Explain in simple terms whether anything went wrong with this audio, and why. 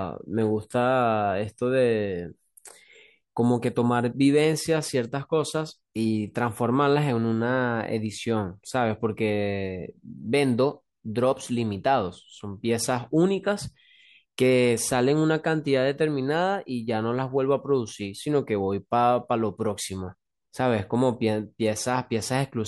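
Clock slip clicks run from 0.21 s to 22.55 s: faint, regular ticks about every third of a second, around a hundred in all, under the speech. The likely cause is two devices on unsynchronised clocks, so a single sample keeps getting dropped or repeated.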